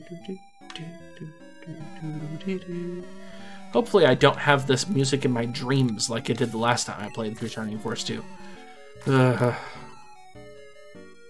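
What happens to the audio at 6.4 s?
At 6.4 s the resampler is restarted on every block, from 4.28 to 9.48 s. Each 40 ms block is rate-converted on its own, likely halving 48 kHz to 24 kHz, so every block edge carries an error heard as a 25 Hz ticking buzz under the sound.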